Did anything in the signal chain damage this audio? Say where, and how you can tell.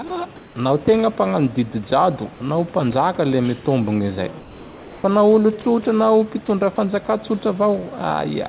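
Yes, and it happens at the call-processing stage. At 0.08 s a 20 ms sliver of speech drops out and turns into steady hiss. That's likely sound dropped by the voice detector, which took that quiet moment for background and briefly stopped sending.

From 0.36 to 0.56 s and again from 4.4 to 5.04 s, the room tone goes flat and featureless, about 1 dB and about 3 dB quieter respectively. That's likely comfort noise in place of the background: the receiver fills transmission gaps with synthetic noise under the call path's 4 kHz ceiling.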